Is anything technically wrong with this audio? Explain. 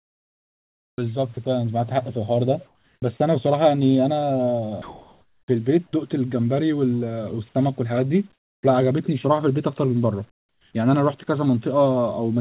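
Yes, the speech passes through a call path with nothing above 4 kHz, which fits a narrowband codec such as G.711, and several voice-detector faults are audible.

Sound chopped by the voice detector, 0 to 1.37 s: the detector likely toggled repeatedly, so about a second of speech edges becomes comfort noise, making the sound choppy.

Comfort noise in place of the background, 2.66 to 3.02 s, 4.82 to 5.93 s, 8.33 to 8.63 s and 10.31 to 10.73 s: transmission likely paused during silence, and the receiver substituted steady, featureless synthetic hiss. It is about 11 dB, 17 dB and 7 dB quieter than the real background in the first, third and fourth gaps.

Onset clipped by the voice detector, 3.00 s: the detector likely reacted late, so the first 20 ms went unsent and the speech begins abruptly without its soft start.

Sound dropped by the voice detector, 5.87 to 5.93 s: quiet speech was likely mistaken for background, and about 40 ms of it gives way to steady noise before resuming.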